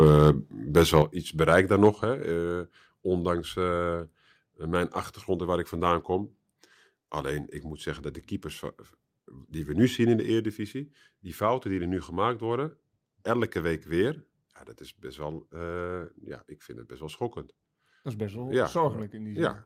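The microphone's input gain was likely set too high at the start, so peaks ran past the converter's ceiling by about 2 dB between 0.02 and 0.06 s. This is microphone overload: the tops of the waveform are sheared flat on a small share of samples, giving the opening a harsh, crackly edge. The same likely cause recurs from 0.77 to 0.98 s, again about 2 dB over, with a small fraction of samples flattened, and the loud syllables there sound gritty.

At 1.02 s, just before "iets bereikt daar", the call software likely reacted to that distortion by lowering the device's input volume in one step. This microphone volume step-down of about 6 dB makes the voice and the room tone drop abruptly together. Even so, the peaks likely still exceeded the converter limit from 1.84 to 1.87 s, right after "iets bereikt daar", by about 1 dB, with a brief crackle.

At 2.04 s the software likely stepped the input down again, by about 5 dB, and the level falls suddenly once more. 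A final step-down, likely triggered the same way, comes at 10.2 s, just after "we nu zien in", cutting the level by about 3 dB. By then the voice sounds noticeably quieter than at the start.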